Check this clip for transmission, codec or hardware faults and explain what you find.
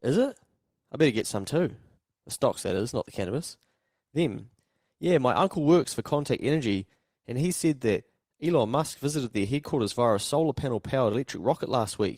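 Three short stretches of this speech were lost in transmission and patched by lost packet rebuilt from error correction, at 1.15 to 1.21 s, 2.29 to 2.31 s and 8.49 to 8.51 s. The packets carrying these moments never arrived, but each following packet held a low-bitrate backup copy. The Opus decoder played those copies, so there is no dropout. The first repair spans about 40 ms, which fits two packets; the others are about 20 ms each. Each patch sounds briefly rougher and noisier than the surrounding speech.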